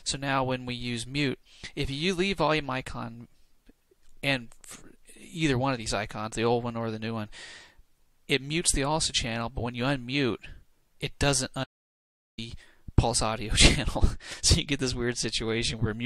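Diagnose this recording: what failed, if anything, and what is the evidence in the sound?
An audio dropout to silence, most likely a momentary loss of the input signal at the device or link stage while the recorder kept writing zeros. From 11.64 s to 12.38 s the sound stops abruptly, leaving about 0.74 s of silence with no room tone, then resumes mid-flow.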